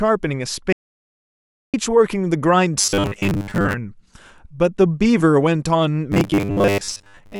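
This speech clip suffers from an audio dropout to silence. The input feed was likely interrupted while the recorder kept writing silence. From 0.73 s to 1.74 s the sound cuts out abruptly and returns mid-flow, leaving about a second of dead digital silence with no room tone underneath, and whatever was said in that gap is gone. Later, the clip shows robotic sound from repeated short buffers. Audio was likely arriving too slowly, so the playback or capture path kept looping its most recent chunk of roughly 10 ms instead of waiting for fresh samples. That chunk length imposes a fixed 100 Hz buzz on everything, heard from 2.81 s to 3.74 s and again from 6.12 s to 7.39 s. In those stretches the speech becomes a stiff, metallic drone that loosely tracks the syllables, because most of the real audio there is skipped in favour of the repeats.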